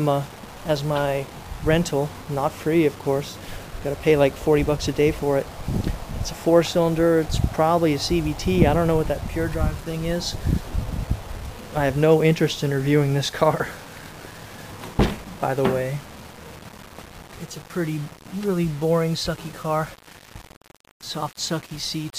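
Low bit depth without dither runs throughout the audio: a grainy, gritty distortion whose texture shifts with the sound, roughest in the quietest passages, where the faintest detail sputters or falls to silence. The error sits around 25 dB below the signal, which fits about 7 bits. The likely cause is rounding to this coarse word length with no dither, so the error tracks the waveform instead of forming a steady hiss.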